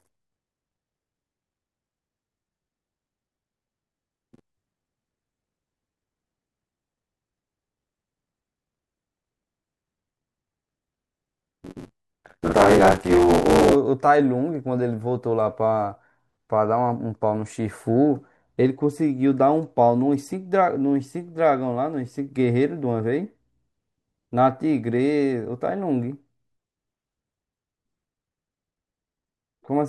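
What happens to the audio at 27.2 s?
Nothing goes wrong at 27.2 s; the speech carries on intact through that moment with no dropout, click or distortion to be heard.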